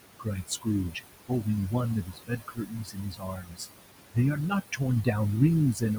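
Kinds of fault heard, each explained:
Overdone noise removal: The background falls to near silence with twinkling specks. A noise reduction stage set too aggressively pushes individual frequency bands far down whenever their level sits close to its noise estimate, so the room noise, which lies only about 11 dB below the speech, is stripped away along with the quieter parts of the voice that share those bands.
Noise suppressor artifacts: Between phrases the noise sinks away, then swells back beneath the speech. This comes from a suppressor that judges each frequency band frame by frame and lowers the ones it reads as steady noise, here by about 20 dB. Because its decisions shift from frame to frame, the leftover noise pumps.
Speech cut by the noise suppressor: Parts of the speech sound swallowed or faint, as though briefly turned down with the background. The suppressor mistakes low-level speech energy for noise and attenuates it. 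This happens early between 0.19 and 0.67 s, dipping by about 15 dB. It is heaviest from 2.04 to 3.67 s, where most of that stretch is pulled down by up to about 20 dB. It returns at the very end, from 5.74 s, by about 11 dB.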